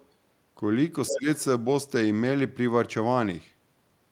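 The other side's voice leaking through appears at 0.00 to 0.06 s as a very faint trace, then at 1.08 to 1.15 s nearly as loud as the speech itself. The likely cause is a loudspeaker echo that the echo canceller failed to fully remove from the microphone.

Speech suppressed in double talk follows from 1.10 to 1.27 s, overlapping that second leak. The talker's speech sinks by roughly 15 dB for about 150 ms, likely because the canceller confused talker and echo during simultaneous speech and attenuated both.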